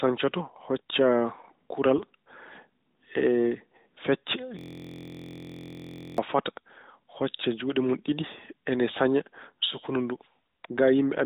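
At 1.98 to 2.03 s there is a burst of AMR bit errors. The less protected bits of the codec frames arrived corrupted, though the frames were still accepted, so the excitation pulses and the fine pitch, gain and spectral values were decoded wrong. For about 50 ms the speech turns hoarse and gargly while keeping roughly its level. The length points to two damaged 20 ms frames, at an error rate of a few percent. On a spectrogram this shows as a smeared, noisy patch with broken harmonic lines, all still under the 4 kHz ceiling of the narrowband AMR path.

From 4.59 to 6.18 s a system hang loop takes over. The system froze while the audio hardware kept replaying the same stretch of its ring buffer, so one 23.22 ms slice repeats exactly, 69 times. The slice length fits a 1024-sample buffer. At a repeat rate of 43.1 Hz this is heard as a steady, rough buzz rather than the original speech. A waveform view shows an identical short pattern tiled edge to edge. 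A spectrogram shows evenly spaced horizontal lines at multiples of 43.1 Hz, frozen for the whole 1.6 s.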